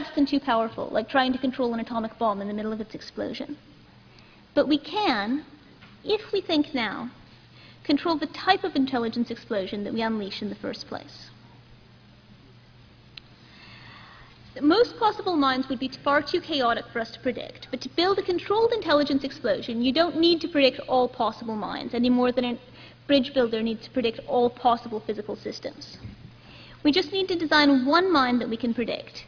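Nothing technically wrong turns up in this audio, so there are no times or causes to point to.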